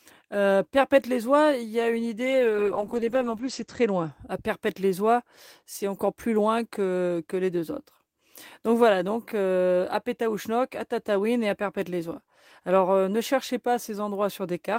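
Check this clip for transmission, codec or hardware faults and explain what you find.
Two separate faults affect the speech, one in the codec path and one in the channel path.

From 2.27 to 4.17 s there is a call bitrate drop. The encoder coded the audio far more coarsely, with the bitrate likely falling from 32 to 10 kbps, and the audio bandwidth narrowed from 20 kHz to 8 kHz. For about 1.6 s the speech sounds muffled and rough. A plain filter would only dull the sound, but here the granular coding texture appears along with the lost top end, and both recover together.

From 5.77 to 6.01 s the level drops by about 6 dB, most likely because one stereo channel dropped out and the mono sum lost half of its shared content. A full dropout would go silent, but here the sound continues at a lower level. The step is abrupt and flat, unlike a gradual gain dip.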